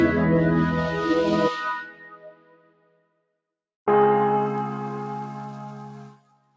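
From start to finish a noise suppressor built for speech is acting on sound it was never meant for, treating sustained, steady content as noise. Its gain swings by around 20 dB, so the level pumps and flutters rather than staying steady. That separates it from a compressor, which follows loudness, not steadiness. Between 1.53 and 3.25 s, the noise suppressor cuts this sound by up to about 19 dB for roughly a second and a half in total. Held parts sink while sharp onsets survive, which is why this is not a plain dropout. From 6.12 s to the end, a similar dip of about 19 dB, lasting roughly half a second, pulls the sound down. Above this, the call microphone path leaves nothing over 8 kHz.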